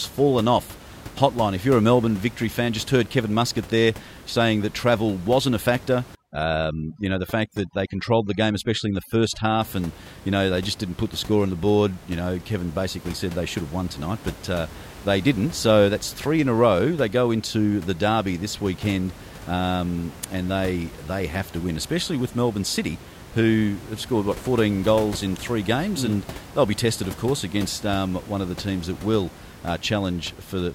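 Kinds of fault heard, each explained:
Overdone noise removal: from 6.15 to 9.61 s, after "travel wasn't a factor" and up to "and you know they", the background drops and breaks up into twinkling specks. A noise reduction stage set far too strong is switching individual frequency bands down or off whenever they sit close to its noise estimate. The steady room noise, about 18 dB below the speech, is pushed down along with the quieter parts of the speech.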